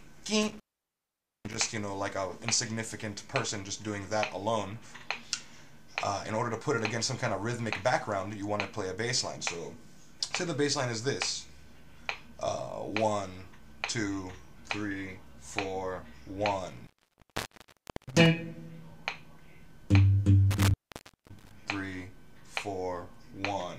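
The audio cuts out three times from intermittent contact: at 0.43 s for 0.85 s, 16.68 s for 1.21 s, and 20.51 s for 0.56 s. A loose cable or plug briefly opens, so crackle marks each edge and faint hiss fills the gap, unlike a clean, silent digital dropout.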